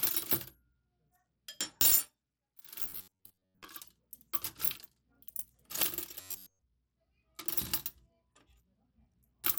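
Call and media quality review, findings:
Whole clip: treble thins and flickers, with gritty noise and aliasing riding on the sound. Likely Bluetooth SBC compression at a starved bitpool, fits roughly 96 kbps. Top sub-bands lose their bits. Unlike packet loss, there are no gaps or timing breaks.

2.82–3.68 s and 6.21–6.61 s: rigid metallic buzz at 93.8 Hz, most of the audio replaced by repeats. Robotic sound from repeated short buffers, likely an underrun looping about 10.7 ms blocks. Unlike codec grit, the pitch is fixed and confined to these windows.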